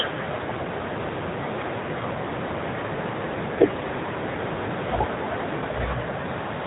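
Speech carrying the AMR narrowband mobile codec throughout: nothing passes above about 3.8 kHz, and the vocal-tract model driven by sparse pulses leaves the voice plainly buzzy and synthetic, a degree of damage that points to a low mode near 8 kbps.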